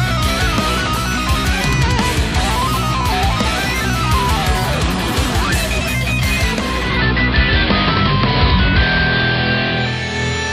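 At 6.51 s the sound dulls and a steady hiss rises underneath, over a half-second cross-fade. The treble is reduced, the level shifts by about 2 dB, and the hiss sits well below the signal, some thirty-odd decibels down. This is digital radio blending to analogue: the receiver lost its digital stream and fell back to the station's AM broadcast, returning to digital at 10.23 s.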